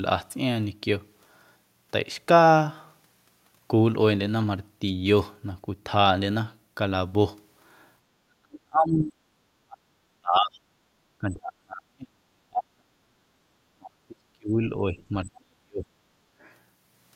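From 8.22 to 9.22 s, then 9.65 to 9.98 s, 10.21 to 10.62 s and 11.19 to 12.87 s, the speech sinks and breaks apart. This is speech suppressed in double talk. The echo canceller likely heard both ends at once and muted everything, at times by around 40 dB.

At 13.15 to 13.47 s, the room tone dips by about 12 dB. This is background gated by the echo canceller. It clamped the microphone while the loudspeaker played, then released.

The speech drops again from 13.75 to 15.87 s. From 16.21 to 16.45 s, the background falls by about 15 dB.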